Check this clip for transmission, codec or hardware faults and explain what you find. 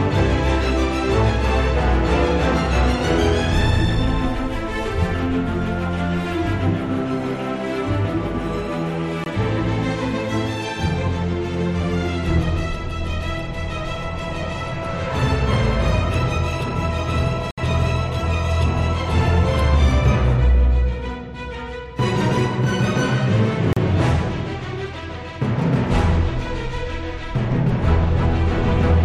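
Three short gaps of silence sit at 9.24 to 9.26 s (about 22 ms), 17.51 to 17.58 s (about 66 ms) and 23.73 to 23.77 s (about 36 ms), each a likely Bluetooth stall. Held packets emptied the headphone buffer, and the sound cuts to silence, then picks up again.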